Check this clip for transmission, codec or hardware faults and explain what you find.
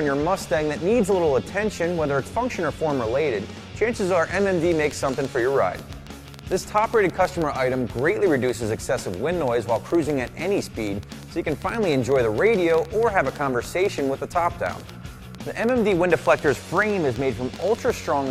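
There's one fault here: a train of clicks running from 4.72 s almost to the end, stopping at 18.06 s. The ticks arrive at roughly six per second but at an uneven spacing, around seventy in all, each with much the same sharp shape and peaking roughly 5 dB above the underlying sound, and they keep ticking through the pauses too. The likely cause is electrical interference from nearby equipment or a faulty connection or power supply injecting repeated pulses into the signal path.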